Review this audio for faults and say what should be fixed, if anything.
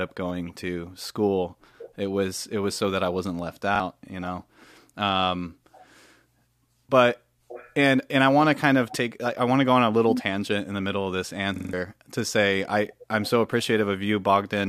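Repeated buffer at 3.76–3.80 s, after "that I wasn't left", where a 43 ms slice plays twice, and at 11.56–11.73 s, after "the middle of this", where it stutters five times. Each hard-joined repeat fits a 2048-sample buffer. Unlike a dropout, the gap holds copied audio rather than silence. A larger output buffer or higher audio-thread priority would prevent it.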